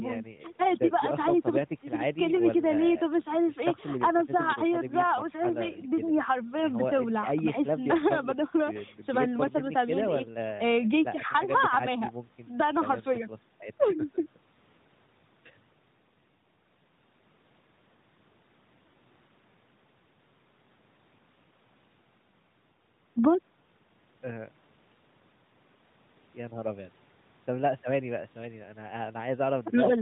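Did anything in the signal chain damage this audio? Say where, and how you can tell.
No, nothing in the chain damaged this speech. It has passed through the AMR narrowband mobile codec, which leaves nothing above 4 kHz and only light coloration, consistent with its highest 12.2 kbps mode.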